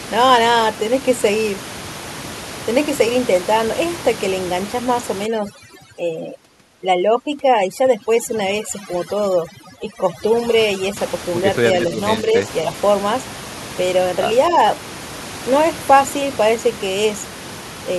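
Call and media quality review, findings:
Overdone noise removal, 5.26 to 10.97 s. Room noise, about 13 dB below speech, is pushed down and breaks up into twinkling specks. Suppressor gain set too aggressive: bands near the noise estimate are cut, taking low-level speech detail with them.

Speech suppressed in double talk, 12.22 to 12.48 s and 14.50 to 14.57 s. Brief dips in the talker's level, about 5 dB at worst, lasting roughly 0.2 s and well under 0.1 s. Likely the echo canceller treating near-end speech as echo during simultaneous talk.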